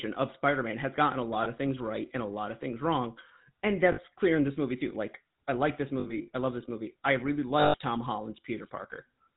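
Throughout, the GSM full-rate codec's pulse-driven vocal-tract model gives a buzzy, gravelly roughness, with nothing passing above 4 kHz, consistent with a 13 kbps stream. Lost GSM frames at 1.44–1.47, 3.92–3.99 (before "clear in this movie"), 6.00–6.29 (between "I like this" and "I love this", scattered, longest run around 70 ms) and 7.60–7.76 s (after "I really") repeat the last good frame, producing a metallic ring.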